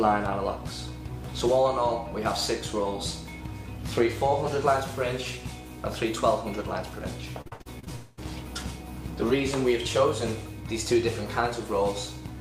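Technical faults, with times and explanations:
7.41–7.91 s: repeated packet loss (robotic sound). Short holes recur about half a dozen times, the longest near 66 ms, and each is bridged by extending the preceding sound. Roughly half this span is synthetic fill, giving a choppy texture with fragments missing.
7.96–8.19 s: a fading buzz or hiss replaces the audio for about 0.22 s, with no silence before the sound resumes. This is likely a long network dropout: the receiver kept stretching the last received sound across the gap, and the original content there is lost.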